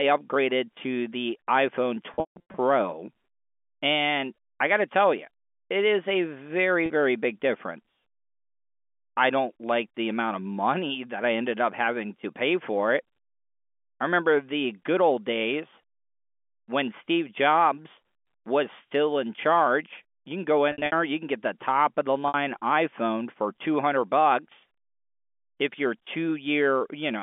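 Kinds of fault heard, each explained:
packet loss with pitch repetition: lost packets are bridged by looping the last pitch cycle, so the speech briefly hangs on a buzzy held tone, as after "it is a very" at 6.86 s, rather than dropping into a plain dropout's hard silence.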